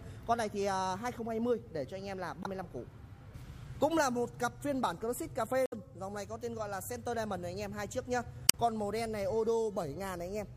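A short piece of audio with three brief glitches that sound like damaged data in a compressed stream: at 2.42 to 2.46 s, 5.66 to 5.73 s, and 8.46 to 8.55 s, each under a tenth of a second. They come across as short disruptions in the sound. Corrupted or missing bytes in those spots make the decoder misread the frames, lose its place, and hunt for the next valid frame header before playback settles again.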